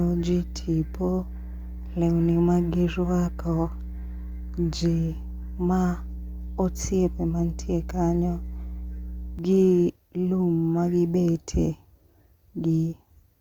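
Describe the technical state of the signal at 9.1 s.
A ground loop or nearby transformer is feeding the 60 Hz power line into the signal, producing mains hum that runs from the start to about 9.39 s. At 9.1 s a steady low tone with some low harmonics sits roughly 10 dB below the speech.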